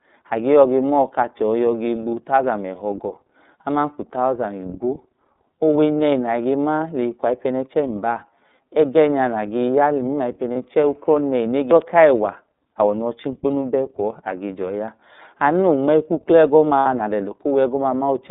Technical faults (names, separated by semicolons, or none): iLBC codec; lost iLBC frames